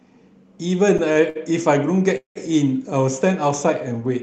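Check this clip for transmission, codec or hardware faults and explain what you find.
Four timing faults, all from packets arriving late.

Short stalls from a late packet occur at 0.97, 1.13 and 1.30 s. Late packets emptied the jitter buffer, so the receiver held the last sound for about 15, 26 and 57 ms, causing brief stretched, faintly buzzy hesitations with nothing lost.

A call audio freeze runs from 2.17 to 2.37 s, likely from packets held up in transit. The held sound fades into roughly 130 ms of silence before the speech resumes where it stopped.

The call codec's band limit near 8 kHz is also present.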